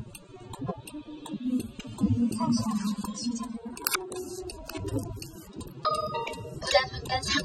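From start to end, the audio carries AAC compression damage, plainly audible throughout. The encoder splits the signal into frequency lines and keeps only what a hearing model says matters. Too few bits were available here. The damage fits AAC-LC at a low bitrate, likely around 24 kbps. Detail is smeared and textures lose definition. Coarsely quantised bands leave gaps or roughness. Nothing is present above 19.6 kHz.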